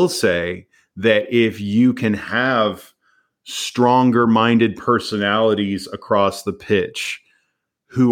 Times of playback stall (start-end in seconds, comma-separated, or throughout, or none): none